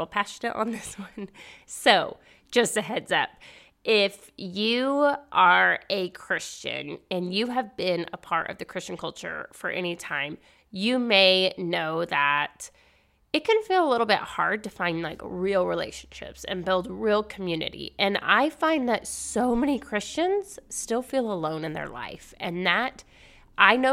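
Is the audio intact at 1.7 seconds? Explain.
Yes, the speech at 1.7 seconds plays through intact, with no audible fault at that moment.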